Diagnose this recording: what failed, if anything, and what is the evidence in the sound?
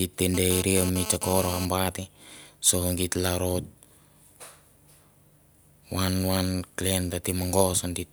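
GSM phone buzz got into the analogue wiring. From 0.34 to 1.65 s, a hard, raspy 217 Hz buzz with dense harmonics sits about 10 dB below the speech, then stops. A 2G handset's radio bursts were rectified in the audio circuit. Its intermittency suggests data transfer, and its pitch and rasp rule out smooth 50 or 60 Hz mains hum.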